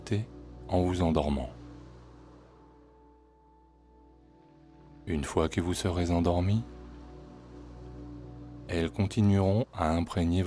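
Nothing in the audio stood out as a technical problem on listening.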